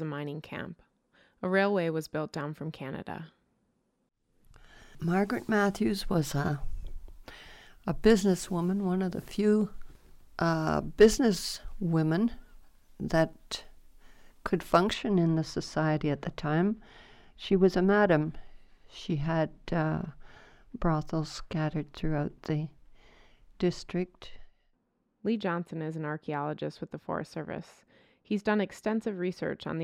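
From 14.94 s to the end, de-emphasis is applied wrongly. A treble cut hits audio that needs none, dropping 10 kHz by about 14 dB. Everything turns dull and muffled.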